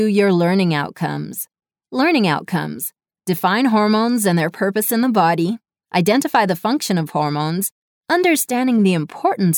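A brief crackle at 0.18 s, then crackle on the peaks from 5.96 to 6.36 s, is hard clipping. In both places the signal runs about 2 dB past what the stage can pass, so the tops of the waveform are sheared off flat. Those flattened peaks add harmonics high in the spectrum, heard as a momentary tick in the first case and as a short stretch of crackle on the peaks in the second.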